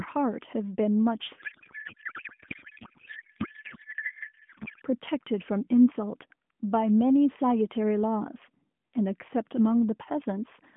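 From 1.38 s to 4.83 s the speech gives way to garbled noise and warble that barely tracks it, then returns. This is a codec payload misread: octet-aligned AMR frames are read as bandwidth-efficient, so the decoder finds each field in the wrong bit positions.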